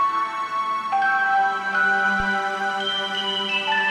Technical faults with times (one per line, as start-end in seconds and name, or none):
2.20-2.27 phantom power thump